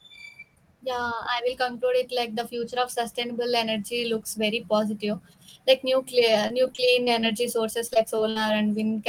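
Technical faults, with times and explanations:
6.47–7.25 s, repeated packet loss (robotic sound): the speech breaks up into a rapid series of short holes, the longest about 24 ms, each patched by stretching the sound just before it. About 14% of the stretch is filled this way, giving a choppy texture with pieces missing. Unlike a single dropout, the holes keep recurring, and unlike plain gaps they are not heard as silence.
7.87–8.37 s, repeated packet loss (robotic sound): a second, denser burst of the same concealment, with about a quarter of the span filled in. The longest hole here is about 59 ms. The next loss follows almost at once, so the holes keep recurring across the span.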